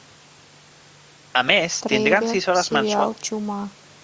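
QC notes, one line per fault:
No faults found in this speech clip. It has passed through call microphone processing, so the lowest bass is trimmed away and nothing is heard above 8 kHz.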